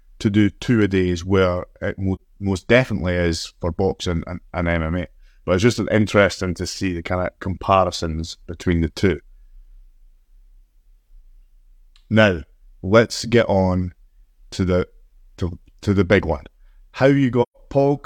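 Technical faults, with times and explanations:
2.15–2.20 s, AAC frame loss with muting: a brief dip between "a days where it" and "most definitely is for", about 43 ms long, which fits one lost frame whose spectrum the decoder zeroed. The overlapping windows fade the sound out and back in.
17.42–17.57 s, AAC frame loss with muting: a longer soft-edged hole of about 128 ms, consistent with three consecutive frames muted. The window overlap smooths both edges, so the gap fades out and in.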